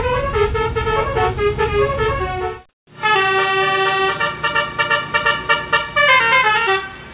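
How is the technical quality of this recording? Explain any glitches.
The recording carries one brief glitch, and the whole clip sits inside a narrowband call path with nothing above 4 kHz, which fits a G.711 telephone codec.

From 2.69 to 2.87 s, comfort noise in place of the background: the sender likely paused transmission during a quiet stretch, and the receiver filled those 180 ms with synthetic noise, so the real background turns into a flat, featureless hiss about 5 dB quieter.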